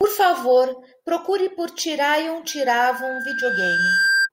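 Loudspeaker feedback squeal enters this speech clip at 2.48 s and runs to 4.29 s. A microphone is hearing its own loudspeaker, and the loop gain tops unity at 1.6 kHz, so that tone swells over about a second and a half until it sits roughly 5 dB above the speech.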